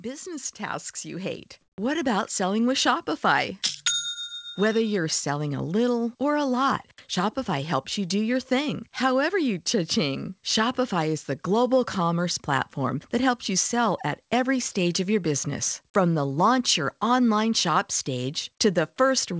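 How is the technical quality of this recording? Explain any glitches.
The recording has two glitches in its first three seconds. It comes through a call link with nothing above 8 kHz, which fits a G.722 codec at 64 kbps.

From 0.05 to 2.66 s there is automatic gain rising. The gain control judged the input too quiet and raised its level by about 8 dB. The speech and the background swell together. That is what separates it from a speaker simply getting louder, where the background would stay put.

From 1.62 to 1.78 s, about 160 ms, there is comfort noise in place of the background. The real room sound gives way to a flat, featureless hiss about 3 dB quieter. It is likely caused by discontinuous transmission, where the receiver fills the gap with synthetic noise. The noise floor never drops to silence, so this is not a dropout.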